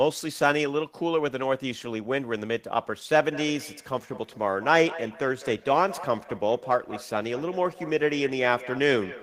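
From 3.32 s to the end, feedback echo between two devices: each word returns about every 200 ms, up to about 15 dB below the speech, growing thinner and more ringing, unlike a single room reflection.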